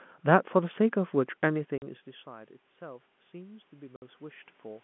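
Speech on a narrowband telephone line, where the talker moves away around 1.5 s. From 1.5 to 4.79 s automatic gain rising slowly pulls the level back up by about 5 dB, and the room noise swells along with the voice, which separates it from the talker simply returning. Packet loss filled with silence cuts clean holes at 1.78–1.82 s (40 ms) and 3.96–4.02 s (60 ms). Their abrupt edges and lengths in 20 ms steps mark them as dropped packets rather than gentle fades.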